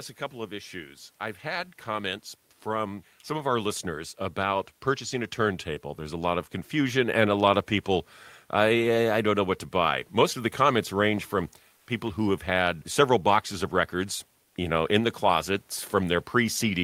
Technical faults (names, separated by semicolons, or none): comfort noise in place of the background